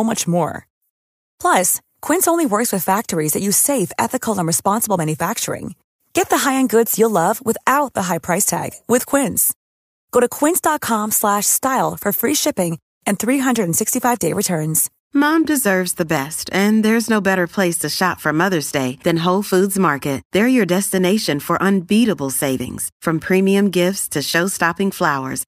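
No technical faults can be heard anywhere in the recording.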